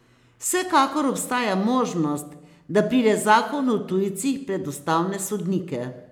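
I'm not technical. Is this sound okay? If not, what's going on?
Yes, it's fine: nothing in this speech recording jumps out as broken or glitchy, so there's nothing to worry about here.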